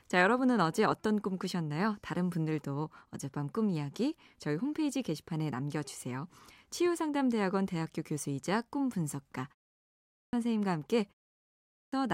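At 9.83 s and again at 11.43 s, clipped start after a pause: the output device has dozed off during roughly 0.4 s of silence and loses about half a second of speech while waking. Speech bursts in abruptly, and waveform and spectrogram show energy starting with no onset.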